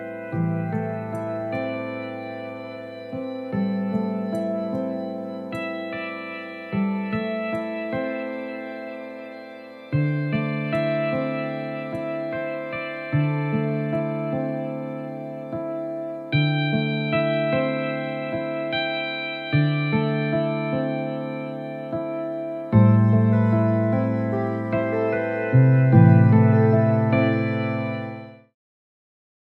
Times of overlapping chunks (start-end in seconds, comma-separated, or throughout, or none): none